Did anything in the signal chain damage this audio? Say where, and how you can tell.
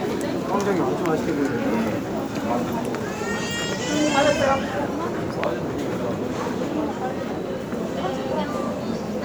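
No, nothing in the signal chain stood out as damaging this recording of everyday sounds on listening.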